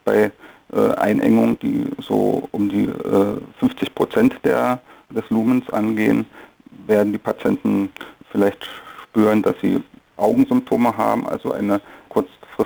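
Sample clock jitter runs through the whole clip. The converter's clock wanders, so each sample lands a little early or late. The timing error looks to be around 10 microseconds. Where the waveform moves fast, that small slip becomes a sizeable error. The result is a grainy hiss riding on the sound, roughly 30 dB below it. It swells on loud and bright passages and drops away when the audio goes quiet.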